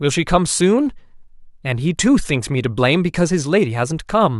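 No audible dropouts, clicks, distortion or level problems turn up anywhere in the recording.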